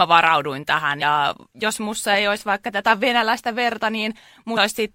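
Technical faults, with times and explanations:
1.01 s, compressed frames skipped: whole frames are skipped between "varauduin tähän" and "jos mussa ei olisi", so about 70 ms vanishes behind a brief smeared blip.
4.56 s, compressed frames skipped: a longer gap of roughly 150 ms, which fits about five frames of around 26 ms, is dropped. The overlapping frames blur the jump instead of clicking.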